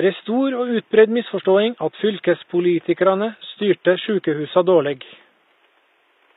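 Speech, with the treble damaged from start to finish. The high end sounds bright but synthetic. S sounds come out gritty and lispy, with a metallic edge. This is plainly audible. The likely cause is HE-AAC compression: the lower spectrum is coded, and the upper band is rebuilt by copying lower bands upward under a coarse envelope. The damage fits a bitrate around 20 kbps. Faint room noise sits about 42 dB below the speech.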